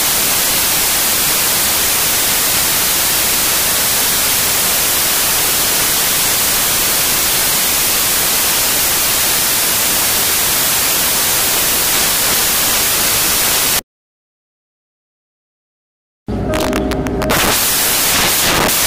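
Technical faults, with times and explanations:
Throughout, samples built from the wrong bytes: each sample has been assembled from the wrong bytes, as if read off by one byte, with the byte order swapped, or with the wrong alignment assumed. The rapidly changing low-order bits end up as the large part of every value, so the clip comes out as loud, harsh broadband noise, close to white on the louder sounds. On a spectrogram this shows as a dense, nearly uniform wash across all frequencies. The waveform is dense with large, rapidly changing values.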